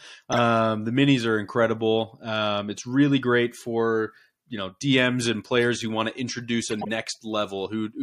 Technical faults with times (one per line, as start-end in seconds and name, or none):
0.32-0.38 corrupt frame decoded
6.68-6.89 corrupt frame decoded